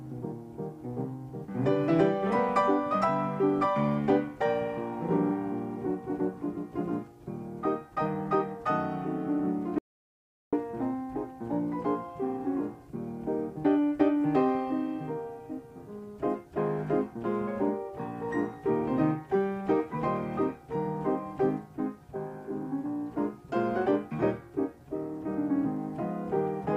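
At 9.79 s the sound cuts out abruptly and returns at 10.53 s, leaving about 0.74 s of silence with no room tone underneath. This is an audio dropout to silence, likely from the input briefly disconnecting or muting while the recorder kept writing silence, so that stretch is lost.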